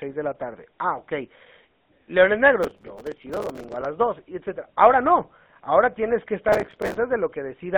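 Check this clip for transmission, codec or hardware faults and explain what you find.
Two things stand out in this speech. The whole clip has gone through the GSM full-rate codec, and there are two bursts of processor overload crackle on top of it.

The GSM full-rate coding runs the entire way through. It rebuilds the voice from a vocal-tract model driven by a sparse, regularly spaced pulse excitation, so there's a plainly audible buzzy, gravelly grain. The band sits at roughly 150 Hz to 3.6 kHz, which fits the 13 kbps full-rate codec.

The processor overload crackle hits from 2.63 to 3.85 s and again from 6.49 to 6.97 s. The processor kept missing its deadlines on short buffers of around 5 ms, dozens in a row, and each miss replayed a scrap of old audio with hard edges. You hear that as gritty tearing over the speech.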